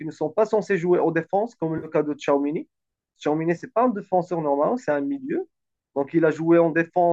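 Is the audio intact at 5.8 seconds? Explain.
Yes, the audio is intact at 5.8 seconds, with no fault at that moment.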